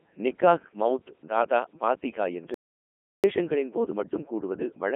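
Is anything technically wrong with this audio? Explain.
Yes, there are two faults.

For the whole clip, the speech has passed through a Codec 2 vocoder. Rather than keeping the waveform, this codec sends only pitch, voicing, energy and a coarse spectral envelope, and the decoder rebuilds the voice from sine waves. The damage is heavy: the voice sounds robotic and buzzy, confined to a narrow radio-style band of roughly 250 Hz to 3.4 kHz, with nothing above 3.7 kHz. That points to Codec 2 at its top rate of about 3.2 kbit/s.

From 2.54 s to 3.24 s, right after "நிக்காஹ் மௌத் தாதா பாத்திஹா", there is an audio dropout to silence. The input was most likely lost, perhaps through a failed link, device or mute, while recording continued and wrote silence. The voice cuts off mid-flow, leaving about 0.70 s of dead digital silence with no room tone, and then resumes. Whatever was said during the gap is gone.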